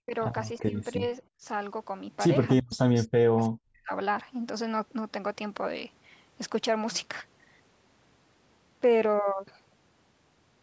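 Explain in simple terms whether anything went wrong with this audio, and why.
Speech suppressed in double talk, likely because the echo canceller mistook both sides talking at once for echo. The voice briefly dips at 0.05, 0.62, 0.94 and 1.39 s, then almost disappears from 2.62 to 3.91 s.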